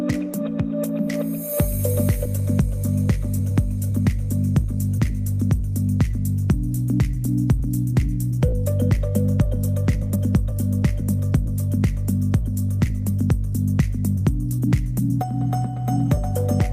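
At 2.25 s there is a skip ahead: roughly a second of audio was discarded while later material was already queued, so playback jumps forward with no fill. The two sides of the missing stretch butt together almost directly, and the transition sounds abrupt.

Three jitter buffer speed-up passages follow, as the receiver trims short pitch-period slices to drain excess buffered delay. They run from 3.39 to 6.15 s at 103% (about a tenth of a second removed), 7.14 to 11.48 s at 104%, and 12.38 to 16.18 s at 106% (about a fifth of a second removed). In each passage the sound runs faster at unchanged pitch, and the last, at 106%, sounds hurried.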